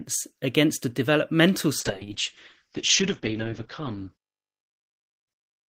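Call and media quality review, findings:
Muffled, rough speech from 1.81 s to end, after "against a developmental". Call bitrate drop: Opus coding coarser, highs cut from 20 kHz to 8 kHz, consistent with about 8 kbps.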